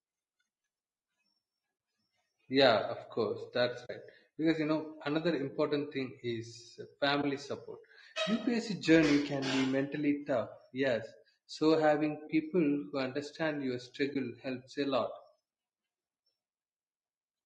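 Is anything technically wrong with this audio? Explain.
Yes. Low-delay AAC compression runs throughout: the speech sounds rough and grainy, with noise between harmonics and a synthetic-sounding top band. The likely cause is AAC-ELD's short frames at a bitrate around 32 kbps.

AAC frame loss with muting occurs at 1.77–1.79 s, at 3.85–3.90 s after "course that's", at 7.21–7.24 s after "another important thing is", at 12.27–12.30 s, and at 14.13–14.16 s between "people who understand your" and "helps a lot". In each case the decoder zeroes the missing spectrum, and the overlapping windows fade the sound out and back in. Each is a soft gap of about 20 ms, except the one at 3.85 s, which lasts about 40 ms, consistent with two consecutive frames lost.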